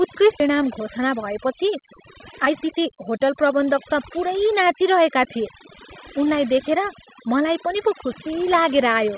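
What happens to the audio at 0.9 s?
Around 0.9 s the speech runs slightly hurried with its pitch unchanged, part of a jitter buffer speed-up from 0.50 to 1.83 s. The receiver, holding more audio than its target, trimmed short pitch-period slices repeatedly, playing about 5% fast and dropping roughly 70 ms.

Throughout, including this moment, the background drops and breaks up into twinkling specks. That is overdone noise removal: bands close to the noise estimate were pushed far down or switched off, taking quiet parts of the speech with them.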